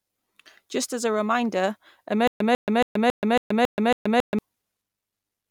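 After "as a reminder", from 2.27 to 4.39 s, a stutter with silent gaps: one 147 ms fragment replays seven times, each followed by 128 ms of digital silence, every 275 ms. Unlike a lone dropout, the repeating burst reveals a likely stalled stream retrying.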